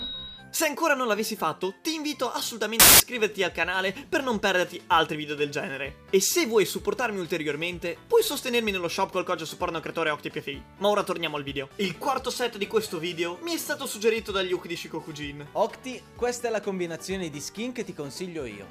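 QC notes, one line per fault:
2.80–3.00 s, samples built from the wrong bytes: for about 0.2 s the sample bytes are assembled in the wrong order or alignment, so the rapidly changing low bits dominate each value. The result is loud, harsh broadband noise rather than distortion of the underlying signal, which sets it apart from clipping or an added noise burst.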